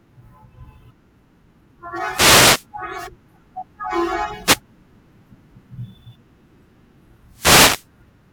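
The analogue FM radio link of a wireless microphone fades as reflections cancel, letting receiver noise rise over the speech. The result is a wireless microphone noise hit, a burst of static swish at 2.09 to 2.66 s, 4.43 to 4.60 s and 7.32 to 7.87 s.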